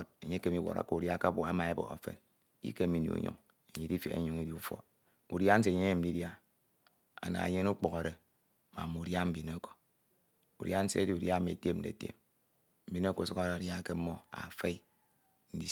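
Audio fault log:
No faults found anywhere in this speech recording.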